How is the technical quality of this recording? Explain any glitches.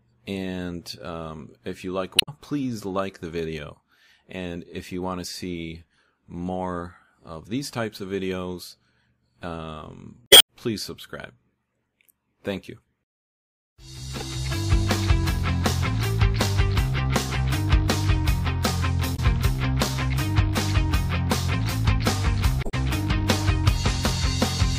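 Damaged data in the compressed stream breaks the recording in five places: 2.16–2.29 s, 10.24–10.48 s, 14.19–14.22 s, 19.13–19.19 s and 22.60–22.74 s. At each point, corrupted or missing bytes leave the decoder unable to read the frames. It loses sync and hunts for the next valid frame header, so instead of the sound there is a short glitch, lasting from a few hundredths of a second to about a quarter second.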